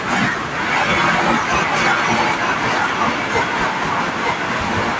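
From 0.52 to 1.25 s, and again from 1.42 s to the end at 4.99 s, a second copy of the speech trails the original by about 0.91 s, only a little quieter than the speech. This is an echo leak, likely from a far end on loudspeaker whose echo canceller let its microphone pickup return down the line. Unlike room reverberation, which smears into a decaying tail, this is a distinct repeat at one fixed delay.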